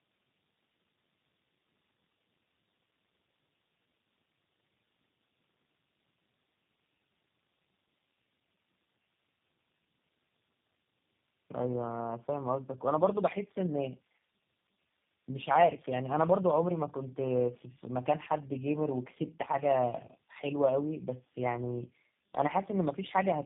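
Throughout, the speech carries tandem speech coding, consistent with three low-rate speech coders in a row, each re-coding the previous one's output. Nothing sits above 3.6 kHz, and the compounded roughness, muffling and warble exceed what any single narrowband codec would leave.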